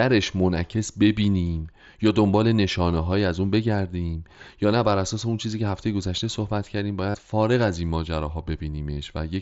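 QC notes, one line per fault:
7.10–7.15 s and 8.96 s, concealed Bluetooth headset packet loss: a 45 ms gap and a brief one are patched by repeating the best-matching recent waveform at full level, so the longer one buzzes and then warbles as real sound resumes over the wideband mSBC link.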